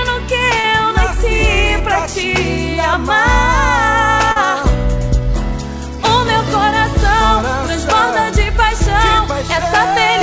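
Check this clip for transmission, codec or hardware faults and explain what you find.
Two brief dropouts were patched over during transmission, heard at 0.60–0.67 s and 4.32–4.39 s; the audio also stops cleanly at 8 kHz, which fits a wideband call codec such as G.722.

Short concealed packet loss, 0.60 s and 4.32 s: about 40 ms went missing each time, and the receiver extrapolated the preceding sound before crossfading back. It sounds like a quick smear or wobble.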